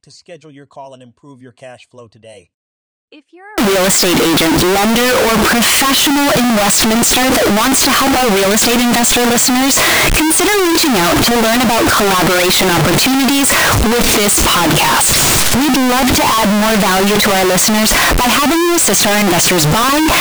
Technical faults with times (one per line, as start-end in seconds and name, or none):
3.58-20.20 signed and unsigned mixed up